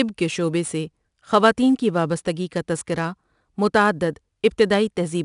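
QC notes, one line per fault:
throughout: 4-bit ADPCM compression. Every sample is coded as a coarse 4-bit step from a prediction, so gritty hiss follows the speech level and roughens sharp onsets. A spectrogram shows a level-tracking noise floor and nothing above 10.6 kHz, which fits a rate near 89 kbps.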